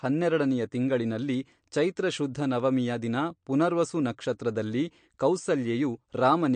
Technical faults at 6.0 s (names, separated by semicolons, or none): MP3 compression